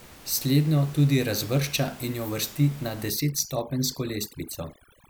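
From 3.1 s, just after "in jo uvrsti na", through to the end, the background drops and breaks up into twinkling specks. This is overdone noise removal: an over-strong noise reduction stage shuts down frequency bands near its noise estimate and takes quiet parts of the voice with them.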